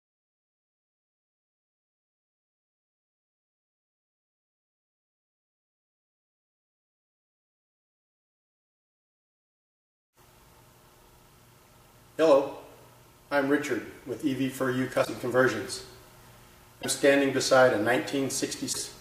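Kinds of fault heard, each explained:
Broken MP3 bit reservoir: three brief disruptions, each about 44 ms long, at 15.04–15.08 s, 16.81–16.85 s and 18.72–18.76 s, where the audio jumps ahead and the continuity breaks. Each spans under two MP3 frames of about 26.1 ms. The likely cause is dropped frames: the frames that follow reach back into the reservoir for bits stored earlier, retrieve bytes from the wrong frame, and decode corrupted output until the stream resynchronises.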